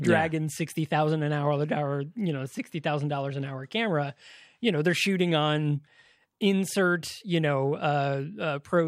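Speech, with no technical faults to be heard.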